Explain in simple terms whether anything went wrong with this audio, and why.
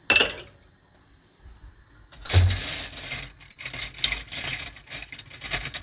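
Two brief glitches break into the sound, from 2.26 to 2.31 s and from 3.51 to 3.58 s. Each is a quick smear or wobble where the sound briefly blurs, and a short sound there may disappear. This is short concealed packet loss. About 40 ms of audio arrived too late each time, so the receiver invented a stand-in by stretching out what it had just heard, then faded back into the real audio. The call path's phone-style sound, which stops at 4 kHz, is working as intended.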